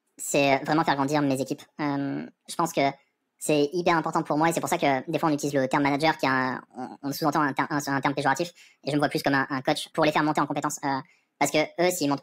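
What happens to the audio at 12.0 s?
At 12.0 s the speech still sounds high and hurried, chipmunk-like, running about half again faster than natural and pitched up by about 7 semitones, a perfect fifth. This is the wrong sample rate fault, and it lasts the whole clip. The samples are played back with no rate conversion at 1.5 times the rate they were captured at, which fits a 32 kHz recording played at 48 kHz, so speed and pitch rise together.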